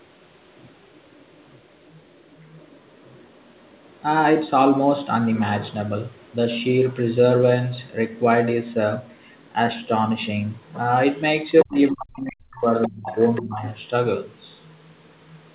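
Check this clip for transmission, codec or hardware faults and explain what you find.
Two echo-related faults run through the speech, both from the far end of a call being picked up by the talker's device.

Other side's voice leaking through: a second, faint voice sits under the talker at 0.0–3.97 s, 5.35–6.32 s, 9.19–9.49 s, 10.66–11.89 s, 12.54–13.87 s and 14.49–15.54 s. It is barely audible at first, around 35 dB down, but rises to about 15 dB below the talker near 11 s and 13 s. The likely cause is the loudspeaker's output reaching the microphone, with the echo canceller failing to strip it out.

Speech suppressed in double talk: between 11.64 and 13.64 s the talker's voice sinks and breaks up in pieces, for roughly a second and a half in all, dipping by as much as about 40 dB while the leaked voice is also present. This is likely the echo canceller, unable to separate the two voices, pulling the whole signal down. 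The narrow band, with nothing above 4 kHz, fits the G.711 call codec.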